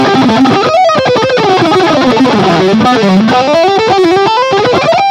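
Hard clipping runs through the whole clip. The signal is driven about 6 dB past what one stage in the chain can pass. Every peak that crosses that ceiling is cut flat. Only a small share of the samples, around three percent, go over. So the damage sits on the loudest moments. Each flattened top adds harsh upper harmonics. The result is a gritty crackle on peaks rather than constant fuzz.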